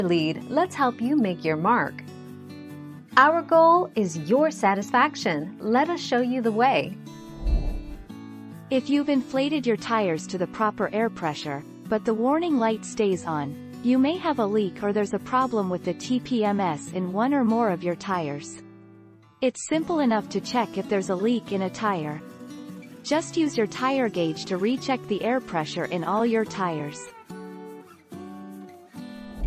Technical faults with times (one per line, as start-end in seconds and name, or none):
none